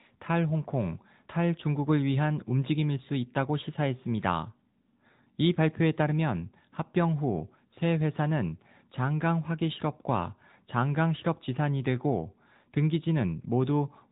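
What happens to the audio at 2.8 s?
At 2.8 s the speech is passing through the AMR narrowband mobile codec, which affects the whole clip rather than just that moment. Everything above about 3.8 kHz is gone, and the voice is rebuilt from a vocal-tract model excited by a few pulses per subframe. That gives it a plainly audible buzzy, synthetic edge, consistent with a mid-range rate near 10.2 kbps. A simple telephone band-limit would sound dull but clean, without that processed, artificial texture.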